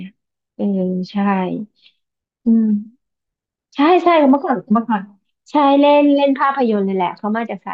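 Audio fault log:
Listening to the speech in this recording, nothing stood out as a fault.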